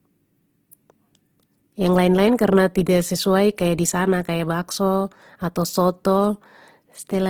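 A speech recording with plainly audible codec damage from start to finish: tonal parts of the voice turn rough, grainy and noisy rather than swirling, while the band still reaches about 20.2 kHz. This is likely Opus compression in its CELT music mode, with a bitrate that fits roughly 16 kbps. Starved bands are filled with folded or noise content, which explains the texture. At 2.38 s there is pre-echo, a short hiss about 14 ms ahead of a sharp attack. The quantisation noise spread across the transform block leaks into the quiet moment before it and softens the onset.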